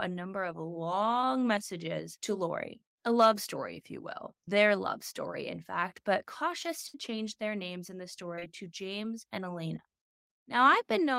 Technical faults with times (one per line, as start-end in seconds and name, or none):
1.21-1.26 short concealed packet loss
4.45-4.50 short concealed packet loss
6.88-6.96 burst of packet loss
8.36-8.44 short concealed packet loss